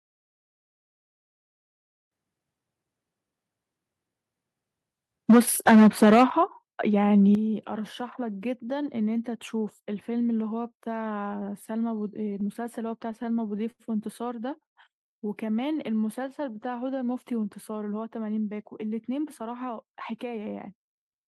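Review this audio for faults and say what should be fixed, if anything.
Truncation distortion on a fade runs from 0.0 to 2.12 s and is worst up to 1.81 s. The quietest stretch sounds grainy. The gain stage reduced the sample values to too few levels without dither, which fits roughly 8-bit resolution. Low-level detail therefore collapses into a handful of coarse square steps instead of a smooth waveform.

Microphone overload is heard at 5.29 to 5.40 s and again at 5.67 to 6.24 s. The loudest moments take on a harsh, crackling edge. The likely cause is an input level set too high, so the peaks tried to go about 6 dB and about 7 dB beyond the converter's limit. A large share of samples in the first burst, and a fair share in the second, had their tops sheared flat.

Microphone volume stepped down three times. The first drop is at 5.31 s (about 2 dB), inside the first overload. The second is at 6.30 s (about 9 dB), right after the second overload. 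The third is at 7.35 s (about 8 dB). Each time the voice and the room tone fall together in one abrupt step. The likely cause is the call software's automatic gain control reacting to the clipped peaks by cutting the device's input volume in single jumps rather than easing it down.

Repeated stalls (stutter) fill 12.29 to 13.82 s. The sound drags and stutters through 13 brief holds, the longest lasting 87 ms, with roughly 202 ms of stretched audio in all. Packets kept arriving behind schedule, so the jitter buffer repeatedly ran dry. Each time, the receiver prolonged the last sound until new data arrived. Nothing is lost, but about 13% of the stretch is concealment.

A short stall from a late packet occurs at 14.66 to 14.78 s. One sound is held about 100 ms too long before the audio carries on from where it left off. A single packet missed its playout time, the buffer emptied, and the receiver extended the preceding sound to bridge the wait. 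The hold suggests the network delay jumped by around 100 ms. No audio is missing, but the timing visibly hitches at that point.

Jitter buffer slow-down spans 15.9 to 17.10 s. The audio plays at about 90% speed with its pitch unchanged, so sounds feel drawn out. The buffer was running short of reserve, so the receiver repeated single pitch periods and slivers of pauses many times in succession. This padded the stream by about 124 ms to rebuild its cushion. It shows up as sluggish pacing rather than a single audible hold.

Jitter buffer speed-up covers 19.02 to 21.26 s. The audio runs at about 110% speed at the same pitch and sounds hurried. The buffer had accumulated more audio than its target, as happens when delayed packets land in a bunch. To shed that excess latency, the receiver cut out short pieces of one or a few pitch periods again and again. In total it removed roughly 200 ms over the span.

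To prevent these faults, dither any digital fade, lower the microphone input level so peaks stay below full scale without the software having to cut it, and stabilise the network path or use a larger, steadier jitter buffer target so the receiver has no need to stall, stretch or compress the audio.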